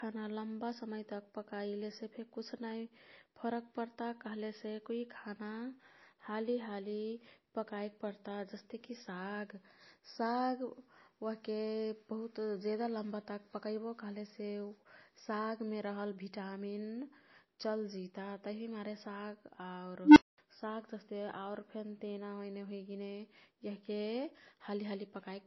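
Throughout the speech, the swirly, smeared detail of a heavily compressed MP3 persists, with nothing above 18.9 kHz. This is likely low-bitrate audio saved at a high bitrate. The roughly 24 kbit/s damage survives re-encoding. On a spectrogram, a hard ceiling at 18.9 kHz sits above blotchy, patchy content.

From 20.05 to 20.38 s an unstable filter runs away. A low tone around 300 Hz swells over about 0.11 s, clips, then drops into roughly 0.22 s of silence. The waveform shows an expanding sinusoid slammed flat, then a dead gap.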